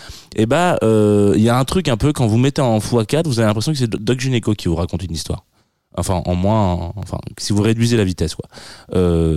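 At 3.98 s, 7.03 s and 7.98 s the speech carries a single sharp click each time, seen on a spectrogram as a thin vertical line running through the whole frequency range. The likely cause is dropped samples: a fraction of a millisecond of the stream goes missing, so the waveform steps abruptly from one value to a later one. Nothing audible is removed; only that sudden step is heard.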